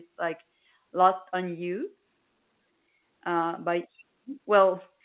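No technical faults are audible.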